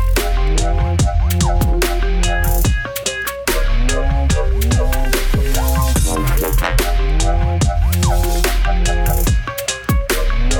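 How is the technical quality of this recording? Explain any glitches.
One glitch stands out. At 3.25 s, a repeated buffer: a piece of about 1.45 ms, which fits a 64-sample buffer, plays twice because fresh audio arrived late. It sounds like a click and shows as a thin vertical broadband line on a spectrogram, with a tiny duplicated stretch and hard step in the waveform.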